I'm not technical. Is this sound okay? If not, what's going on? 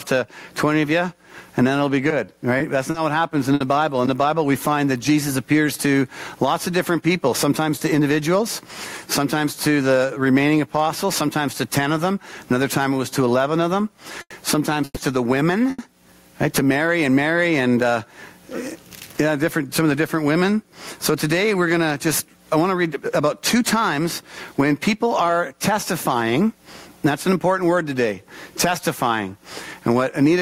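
No. Several problems can be heard.

Gain pumping, throughout: loud and soft parts end up closer in level and the sound is squashed, with a large level swing. The likely cause is a microphone level set far too high, with an automatic limiter pulling it down over and over.

Repeated stalls (stutter), 2.09 to 3.62 s: the connection ran dry five times, briefly. Each time the last sound was stretched to cover the wait, so the audio drags and stutters.

Jitter buffer slow-down, 4.51 to 4.99 s: the audio plays at about 94% speed, with the pitch unchanged, adding 36 ms while the system builds up a safety reserve.

Jitter buffer speed-up, 7.02 to 8.01 s, 17.76 to 19.83 s and 25.22 to 25.73 s: the audio runs 4 to 7% fast at the same pitch, trimming small pieces to cut accumulated delay, so the first and last of these sound hurried.

Short stall from a late packet, 14.21 to 14.32 s and 15.70 to 15.80 s: a late-arriving chunk left a 90 ms and then an 80 ms hole, each covered by holding the last sound too long.

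Call audio freeze, 14.84 to 14.98 s: the sound holds and fades for 120 ms, ending in 30 ms of silence, then continues where it stopped, likely because data was held up in transit.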